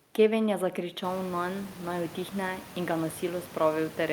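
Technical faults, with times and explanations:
No technical faults are present; the room's background noise grows by about 20 dB at around the one-second mark and then stays about 18 dB below the speech, which is part of the recording itself rather than anything introduced by the signal chain.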